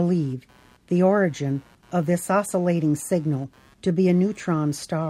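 Load changes in the computer are disturbing the shared ground of the audio circuit, so computer activity noise runs through the whole speech clip: a faint buzzing chirp pulsing around a hundred times a second, roughly 35 dB below the speech, following machine activity rather than the talking.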